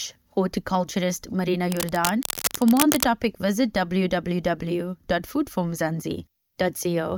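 From 1.72 to 3.04 s, cable scratch noise runs over the speech. It is a dense, uneven burst of scratching and rustling. It sits only a little below the speech, so it is clearly audible. The likely cause is a worn cable, connector or control being moved. Its contact resistance would then jump about quickly. Each jump adds a small burst of noise. These bursts pile up into the rough texture heard here, and then it stops.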